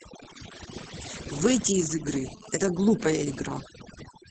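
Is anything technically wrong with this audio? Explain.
Yes, there are three faults. Throughout, overdone noise removal switches off bands near the noise estimate. The background drops and breaks up into twinkling specks.

Opus voice compression is also heard throughout. Its linear-prediction coding is heavy here, which fits a bitrate around 10 kbps. Nothing is present above 9.3 kHz, and the speech sounds muffled, hoarse and slightly robotic.

From 2.08 to 3.37 s, a GSM phone buzz appears. A phone's radio bursts, rectified by the audio circuit, give a hard, raspy 217 Hz buzz. It comes and goes, about 18 dB below the speech.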